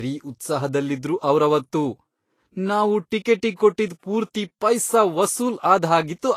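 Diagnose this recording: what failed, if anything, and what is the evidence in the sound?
Low-bitrate audio saved at a high bitrate, throughout: a codec-stage fault. Nothing above 14.2 kHz, likely from an earlier low-bitrate encode that re-saving cannot restore.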